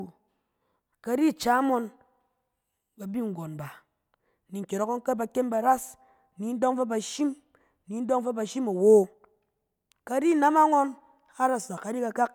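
A speech recording with no audible technical faults anywhere in it.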